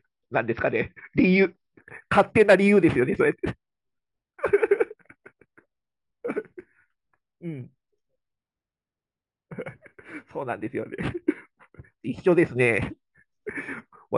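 Imaging from linear upsampling affects this speech clip from 1.80 s to the end. The audio was raised from 12 kHz to 48 kHz by joining samples with straight lines, a weak filter, so the top of the band is dulled and a faint mirrored copy between 6 and 12 kHz, roughly 35 dB down, adds a light metallic shimmer on sibilants.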